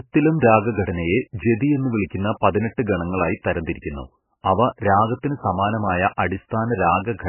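Throughout, the speech sounds muffled and watery, with nothing above 3 kHz and swirling chirps. This is likely heavy MP3 compression so short of bits, fitting roughly 10 kbps, that treble is cut and weak detail flickers.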